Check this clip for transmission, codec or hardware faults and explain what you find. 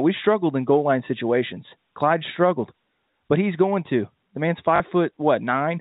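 One transmission fault is audible, on top of the narrowband G.711 A-law telephone sound that stops at 4 kHz. Packet loss with last packet repeated, 4.76 to 4.8 s: 40 ms went missing, which fits two lost 20 ms packets, and the receiver replayed the last good packet to fill the gap. The repeat ignores the pitch cycle, so the gap comes out as a brief robotic stutter buzzing at 50 Hz.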